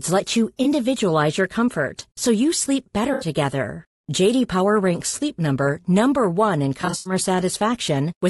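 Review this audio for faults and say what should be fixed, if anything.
The speech is rough and grainy throughout, with noise between the harmonics and a thin, synthetic top band. This is likely low-delay AAC compression. Its short frames resolve pitch poorly, and the damage fits an AAC-ELD stream at about 32 kbps. A higher bitrate would prevent it.

There is AAC frame loss with concealment at four points. The decoder covers each gap by reusing the last good spectrum, which leaves a smeared, phasey patch. After "let you", 0.63 to 0.66 s is patched. After "comfort so you sleep", 3.13 to 3.27 s is patched. Further patches fall at 5.09 to 5.15 s and 6.81 to 7.13 s. The last is scattered, with its longest gap about a tenth of a second. Error protection or retransmission would prevent it.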